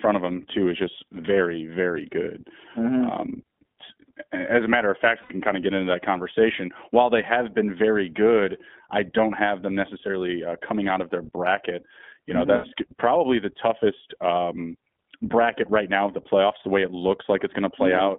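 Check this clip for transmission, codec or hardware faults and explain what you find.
Two faults are audible: narrowband iLBC coding throughout the speech, and two short dropouts where lost iLBC frames were concealed.

The iLBC codec coded the speech on its own at a low rate, in short independent frames. The damage fits the 20 ms, 15.2 kbps mode. The band runs from only about 200 Hz to 3.6 kHz, so the speech sounds muffled, and the coding leaves it plainly rough and synthetic.

Lost iLBC frames, at 5.22 to 5.33 s and 12.56 to 12.66 s: packets went missing, and the decoder filled each 80 ms gap, consistent with four 20 ms frames, by repeating the last pitch cycle blended with noise. Each gap is heard as a brief held, buzzy vowel, and the voice is right again almost immediately afterwards.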